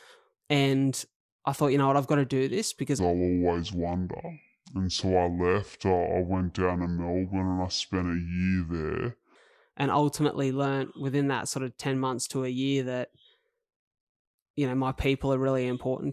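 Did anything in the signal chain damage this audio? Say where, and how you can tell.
Yes. From 2.99 s to 9.35 s, between "to do this because" and "and ultimately learned within", the speech drops 7 semitones and slows to 0.667 times speed together. That is a wrong sample rate at playback: unconverted samples played slower, which fits 48 kHz audio clocked at 32 kHz.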